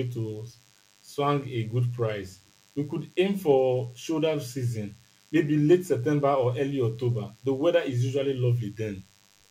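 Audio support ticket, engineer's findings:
Thin, steady buzz under the speech, present for the whole clip, well down in level relative to the speech. Fundamental at 100 Hz with a dense harmonic comb, sounding raspy rather than a smooth hum. Diagnosis: DECT cordless phone buzz. Nearby DECT handset or base station sending a radio burst every 10 ms. Audio input stage rectifying the RF and turning the burst envelope into an audible 100 Hz pulse train. Likely component: unshielded mic cable or preamp input.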